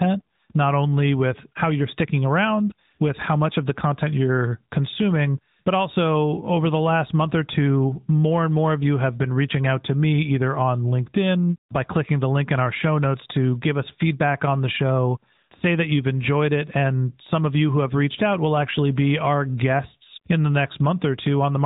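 Speech clip carrying AMR narrowband mobile codec damage from start to finish. Nothing above 3.8 kHz survives, so the sound is thin and muffled. The voice is rebuilt from a vocal-tract model and sparse pulses, giving a plainly buzzy, synthetic edge that points to a mid-range rate near 10.2 kbps.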